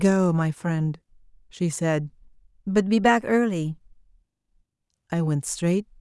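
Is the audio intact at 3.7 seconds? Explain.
No, 3.7 seconds falls inside a drift correction step running from about 2.87 to 3.85 s. The speech speeds up by roughly 5.5% and rises about 92 cents, then snaps back. That's likely clock-matching software jumping its playback rate to rebalance its buffer.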